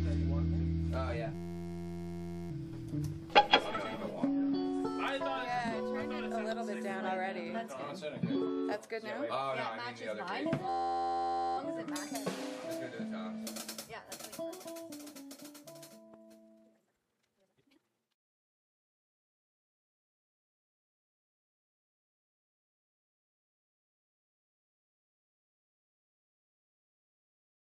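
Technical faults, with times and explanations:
1.35–2.51 s and 10.69–11.58 s, system hang loop: the system froze while the hardware replayed one 11.61 ms buffer, which fits a 512-sample buffer, giving a steady 86.1 Hz buzz.
3.75–3.97 s, frames out of order: two neighbouring 92.9 ms blocks were decoded swapped, so the stretch plays halves exchanged, a garbled flutter.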